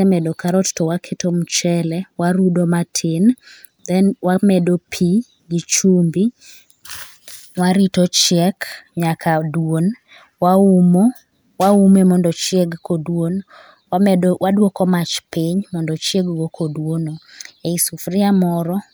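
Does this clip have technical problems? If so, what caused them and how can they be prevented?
No, nothing in this speech recording stood out as a technical problem on listening, so there is no cause to trace or prevention to suggest.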